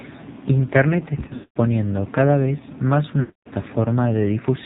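The clip is speech carried through the AMR narrowband mobile codec, with heavy codec damage throughout. Nothing above 4 kHz survives. The voice sounds buzzy and synthetic. That points to a low mode of about 5.9 kbps, where few pulses remain to model each frame.

Lost AMR speech frames break up the speech twice. The first is from 1.28 to 1.57 s, just before "cada vez más". Its longest gap lasts about 220 ms. The second runs from 3.20 to 3.56 s, just after "cada vez más". Each time the decoder reuses the last good pitch and vocal tract settings with falling gain. The sound is drawn out, then fades to silence.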